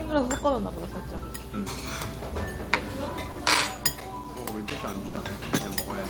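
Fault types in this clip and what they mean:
Short concealed packet loss: twice a brief stretch of audio never arrived and was patched by extending the last sound, about 20 ms near 1.17 s and about 40 ms at 3.31 s. Each is a quick smear or wobble that blends straight back, unlike the longer fading gap later.
CD scratch ticks: a damaged patch on the disc defeated error correction once per revolution, giving 13 small ticks or micro-dropouts from 3.08 s to 5.85 s, each only milliseconds long. Their steady, evenly spaced repetition separates them from the one-off network glitches.
Burst of packet loss: at 5.07 s roughly 60 ms went missing in a run, so the receiver held the last sound and let it fade before the audio resumed further on. It is longer than the short smears.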